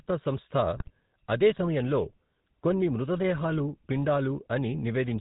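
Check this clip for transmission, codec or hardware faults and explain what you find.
Two faults are present: the whole clip passes through a GSM full-rate codec, and a short burst of GSM bit errors strikes early on.

Throughout, the GSM full-rate codec rebuilds the speech from a vocal-tract model driven by sparse, regular pulses, consistent with roughly 13 kbps coding. Nothing survives above 4 kHz, and the speech carries a plainly audible buzzy, gravelly roughness.

From 0.76 to 0.90 s, just before "అదే సమయంలో", GSM bit errors corrupt the decoder's filter, pitch and gain values across several consecutive frames, so the speech briefly squawks, pops and gargles.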